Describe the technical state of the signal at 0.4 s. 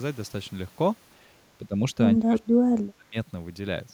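At 0.4 s the signal is intact, with no dropout, distortion, glitch or other fault present at that moment.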